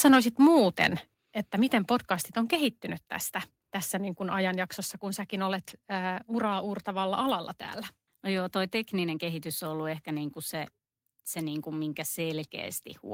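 At 1.14 s and again at 2.55 s the speech and the background behind it drop abruptly in level, first by about 5 dB, then by about 3 dB more. Each sudden step is likely a microphone volume stepped down, with the call software cutting the input gain.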